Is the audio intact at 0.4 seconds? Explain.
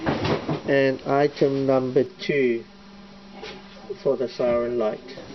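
Yes, the audio is intact at 0.4 seconds, with no dropout, click, distortion or other fault at that moment.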